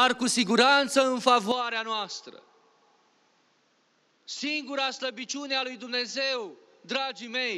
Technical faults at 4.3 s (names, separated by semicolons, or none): input switched to a poorer device